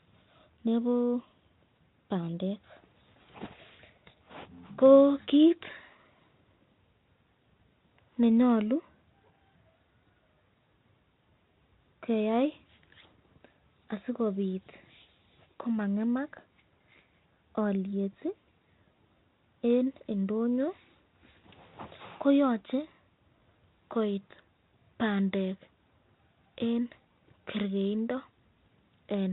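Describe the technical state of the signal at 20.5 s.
At 20.5 s the speech is intact, carried through G.726 ADPCM at 32 kbit/s with nothing beyond that codec's light, normal coloration.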